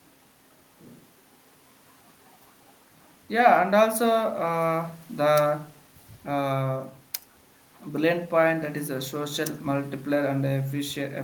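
Nothing in the recording stood out as a technical problem on listening.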